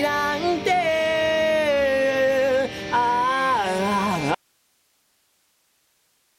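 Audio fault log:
4.35 s to the end, audio dropout to a faint residue: the sound cuts out abruptly mid-flow and never comes back, leaving only a thin bed of hiss roughly 45 dB below where the signal sat. It's a hard switch, not a fade or a natural pause, and since the hiss carries on, the path after the break is clearly still live. That most likely means the source feeding it was lost upstream.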